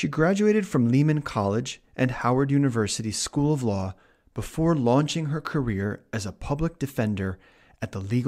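Speech recording with no audible technical faults.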